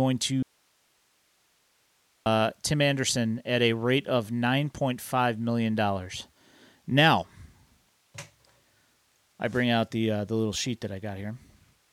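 At 0.43 s the speech cuts out abruptly, and until 2.26 s, about 1.83 s, only a faint hiss remains, roughly 40 dB below the speech, before the speech returns just as suddenly. The hard edges show a break rather than a pause or a fade. This is an audio dropout to a faint residue: the wanted signal was likely lost upstream while the path after the break stayed live, passing only its own noise floor.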